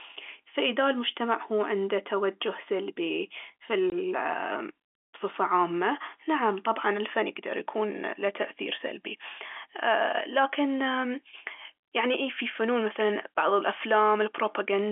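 At 3.9 s, right after "عنده توجه سلبي في", there is packet loss filled with silence. A 20 ms slice of the speech vanishes and the receiver plays nothing in its place, which fits a single lost 20 ms packet. The gap begins and ends abruptly. A concealing receiver would smear or repeat the previous sound across the hole instead of leaving a dead gap. The narrow telephone band of the G.711 line carries on either side of the gap.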